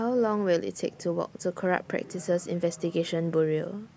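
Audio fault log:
No technical fault can be heard anywhere in this speech recording, and the signal holds steady from its first moment to its last.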